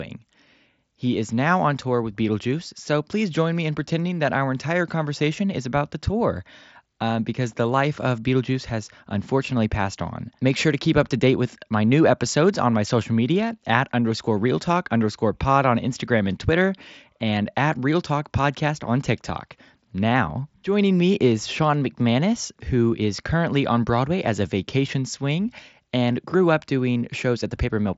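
No technical faults are audible in the speech, which carries the band-limited character of a Bluetooth headset link using the mSBC codec, with nothing present above about 7.7 kHz.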